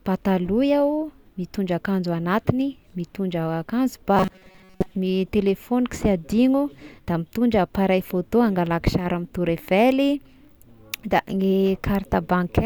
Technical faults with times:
4.17-4.94 robotic sound from repeated short buffers

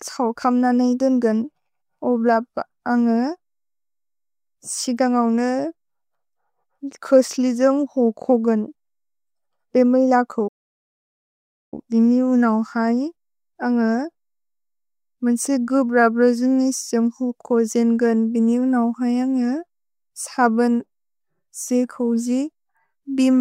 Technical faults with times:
10.47-11.74 playback stall

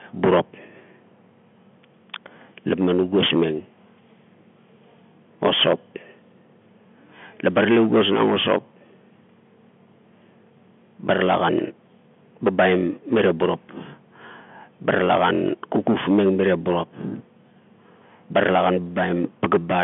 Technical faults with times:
none

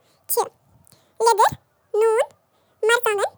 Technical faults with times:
0.00-3.38 audio read two samples at a time (double speed)

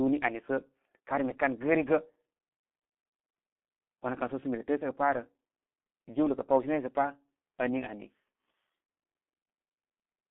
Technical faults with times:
0.00-10.31 G.723.1 codec
8.84-8.90 VoIP packet loss concealed by the speech codec

